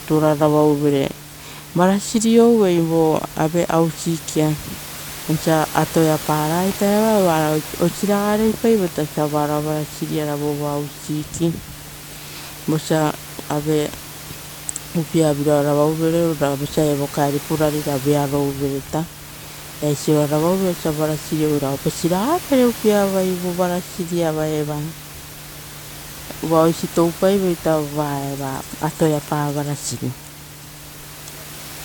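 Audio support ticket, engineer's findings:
No faults found.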